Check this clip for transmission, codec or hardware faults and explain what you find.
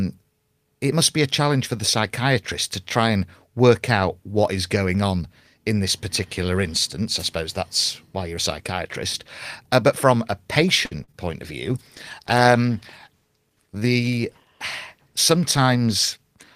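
Five kinds of fault turn up in this speech, all clustered in the second half apart from one early burst.

Wireless microphone noise hit, 7.19 to 7.23 s, between "this particular instance I" and "suppose that's why you're": the analogue FM radio link faded as reflected signals cancelled, letting receiver noise surge up. It comes through as a quick swish of static, under 50 ms long.

Short stall from a late packet, 10.85 to 10.93 s, after "but from a": a packet arrived late, the jitter buffer emptied, and the receiver held the last sound for 58 ms before resuming where it left off. Nothing is lost, but that sound lingers unnaturally, and the call's delay grows by 58 ms.

Short concealed packet loss, at 11.03 to 11.10 s just before "point of", and again at 11.12 to 11.15 s: 40 ms and then 20 ms of audio never reached the decoder in time. The receiver extrapolated from the preceding sound to bridge each gap, giving a brief smeared wobble where real detail should be.

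Call bitrate drop, from 11.68 s to the end: the bandwidth estimate fell and the Opus encoder was pushed from 32 to 18 kbps, where it stays. Coarser coding and a narrower top end make the remaining audio rougher, watery and duller.

Jitter buffer speed-up, 13.59 to 14.01 s: with too much audio queued, the receiver cut many short pitch-period slices, about a twentieth of a second in total. The audio runs at 112% speed with pitch unchanged, so this stretch sounds noticeably hurried.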